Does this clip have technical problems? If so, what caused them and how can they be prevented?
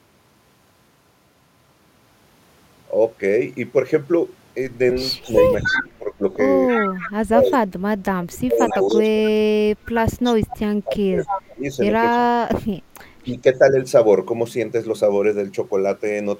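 Yes. Echo leak appears from 5.22 to 7.53 s, 8.69 to 9.09 s and 10.23 to 12.18 s. A copy of the speech returns 276 ms late, loud at first (roughly 5 dB below the speech), then fainter, around 15 dB and 10 dB down. The likely cause is a far-end loudspeaker whose sound reached its microphone and slipped past its echo canceller. Using a headset or a better-tuned echo canceller at that end prevents it.

Speech suppressed in double talk runs from 5.26 to 9.23 s and again from 10.69 to 13.62 s, overlapping the echoes. The talker's speech drops in pieces, about 2 s in total in the first stretch and about 1.5 s in the second, sinking by roughly 30 dB and then 35 dB. This likely comes from the echo canceller mistaking simultaneous talk for echo and attenuating everything. A canceller with reliable double-talk detection, or less aggressive residual-echo suppression, would keep both sides audible.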